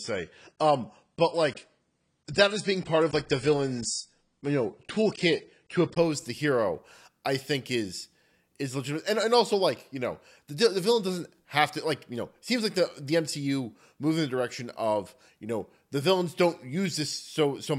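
Adaptive stream starting at a low bitrate, 0.0 to 6.0 s: the player began on a thin version, consistent with about 24 kbit/s AAC, with nothing above 9.7 kHz, then jumped cleaner without a gap just before "the hero I think".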